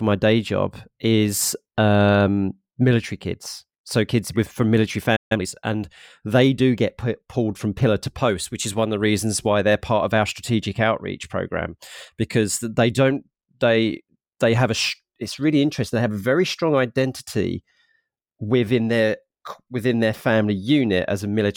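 At 5.16 s, just after "kids with from military", the speech cuts out in a playback stall: about 145 ms of dead silence, likely from the player running dry or its thread being blocked. The waveform shows a flat line and the spectrogram a clean vertical blank band.

From 5.32 to 5.46 s, before "and they do get", time-compressed catch-up follows. The player trims its backlog by splicing out short pieces and cross-fading the rest, playing at twice normal speed with pitch unchanged. It sounds rushed. The spectrogram shows squeezed syllables and small seams.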